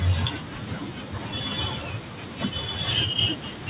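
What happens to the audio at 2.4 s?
Nothing goes wrong at 2.4 s: the speech carries on intact through that moment, heard through the narrowband call path with nothing above 4 kHz.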